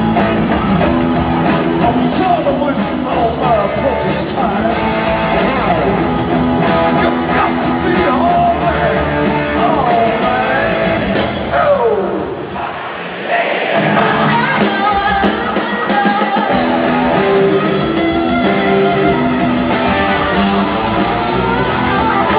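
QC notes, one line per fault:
0.20, 7.05, 9.73, 14.62, 15.24, 19.05 and 22.37 s: hard clipping. Each of these is a single brief peak that pushes just past the limit the signal path can carry, by about 1 dB at 0.20 and 15.24 s and barely at all at the others. The top of the waveform gets sliced flat for an instant, and that squared-off edge sprays harmonics high up the spectrum, so you hear a tiny isolated crackle or tick on the loudest moments rather than any sustained fuzz.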